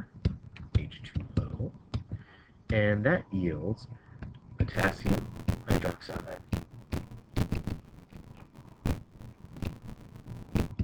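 From 4.73 s to 10.73 s, buffer tearing: writer and playback pointer have slipped, so about half of each period replays audio some 40 ms old. It sounds like a robotic 86.1 Hz rattle, fitting a 512-sample buffer, with evenly spaced seams in the waveform and vertical striping on a spectrogram.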